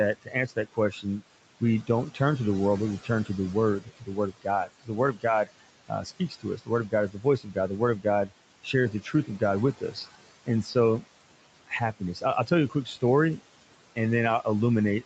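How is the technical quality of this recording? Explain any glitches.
The recording has noise suppressor artifacts throughout and three stretches of speech cut by the noise suppressor. The room noise sits about 17 dB below the speech, and the call path carries nothing above 8 kHz.

Noise suppressor artifacts, throughout: the suppressor pulls steady background noise down by about 18 dB frame by frame, so the noise sinks between phrases and rises under the words. Unlike the cuts, this affects the noise rather than the speech.

Speech cut by the noise suppressor, at 0.22 to 2.2 s (ending just before "to the world but"), 3.03 to 11.04 s (starting after "the world but we"), and 11.68 to 13.4 s: the suppressor mistook quieter parts of the speech for noise and turned them down by about 17, 18 and 16 dB at their deepest. Across those spans, roughly half a second, two seconds and a third of a second of speech sound swallowed. 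These dips fall on the speech itself, not on the background between phrases.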